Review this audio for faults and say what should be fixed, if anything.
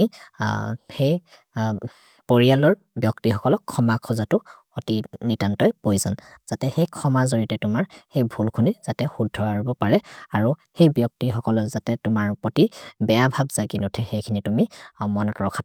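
Nothing needs fixing; no faults are audible.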